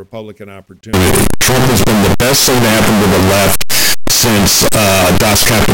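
A signed and unsigned mix-up runs from 0.93 s to the end, likely from 8-bit samples read with the wrong sign convention. The flipped top bit turns every zero crossing into a full-range jump, so the speech becomes loud, harsh distortion, with quiet moments blaring as loudly as the rest.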